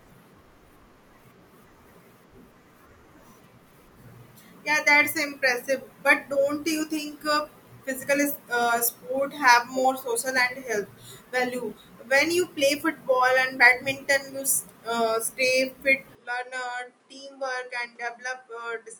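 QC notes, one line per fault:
16.15–18.99 s, input switched to a poorer device. At 16.15 s the speech turns abruptly duller and about 10 dB quieter, with no gap at the change. Nothing is heard above 10.5 kHz from then on, so the top end sounds clipped off. A new background noise enters, sitting roughly 35 dB under the speech. The sudden shift in band, level and noise floor together likely means the recording moved to a lesser microphone.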